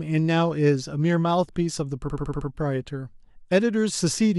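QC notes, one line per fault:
2.08–2.48 s, repeated frames: a 68.2 ms slice of speech plays six times in a row, a stutter that points to one compressed block being written or sent again. The five extra plays add 392 ms, and the speech after them is delayed by that amount.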